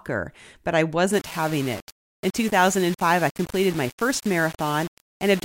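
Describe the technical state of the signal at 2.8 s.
At 2.8 s the speech sits inside a stretch of low bit depth without dither, running from 1.13 s, just after "but I", to the end at 5.44 s. The samples were likely rounded to about 5 bits with no dither, so the rounding error tracks the signal, sitting only about 20 dB below it. The result is a grainy, gritty distortion that changes with the sound, and the quietest parts break up or sputter rather than fading smoothly.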